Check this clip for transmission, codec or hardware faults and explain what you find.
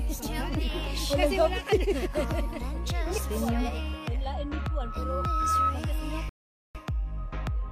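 Two faults can be heard: a loudspeaker feedback squeal and a rebuffering stall.

From 4.59 s to 5.79 s there is a loudspeaker feedback squeal. A microphone is picking up the loudspeaker it drives. At 1.3 kHz the loop gain goes above one, so that frequency feeds on itself. It swells over about a second into a steady, piercing tone. At its peak it sits about 5 dB above the rest of the sound. Then it stops.

From 6.29 s to 6.75 s there is a rebuffering stall. The player used up its downloaded audio and had to wait for more. The sound drops to silence and then picks up exactly where it left off. Nothing is skipped or lost. The pause adds 0.45 s to the clip's running time.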